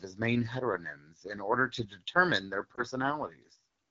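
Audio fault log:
throughout AMR wideband (HD Voice) codec. The speech sounds rough and raspy. The coarse coding fits the low 8.85 kbit/s mode, and the damage is plainly audible.
2.76 to 2.81 s Lost AMR speech frames. Just after "order to determine their", a brief dip or warble. The decoder reused the last good settings, which points to one lost 20 ms frame.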